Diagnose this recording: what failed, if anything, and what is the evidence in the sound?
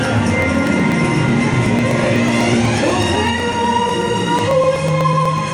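Periodic USB or driver dropouts at the driver stage. Ticks every 0.124 s from 0.05 to 5.38 s, each skipping about a millisecond of audio.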